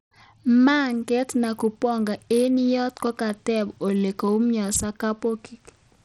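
Throughout the speech, the treble flickers and thins, a gritty grain rides on the sound, and nothing sounds above 18.6 kHz. The damage is plainly audible and likely comes from Bluetooth SBC compression, whose starved upper sub-bands get few bits at a rate fitting roughly 80 kbps.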